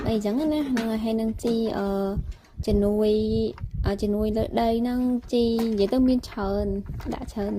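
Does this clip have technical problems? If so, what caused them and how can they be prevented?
Yes. From 0.38 s to 4.07 s there is a call bitrate drop: the audio turns rough and watery, and the high frequencies thin out, with the worst stretch lasting about 2.6 s before clarity returns. The sound points to the encoder being pushed from around 48 kbps down to roughly 18 kbps after the bandwidth estimate fell. Unlike packet loss, there are no gaps or stutters, only a continuous coarsening. Prevention: keep network headroom stable and set a sensible minimum bitrate.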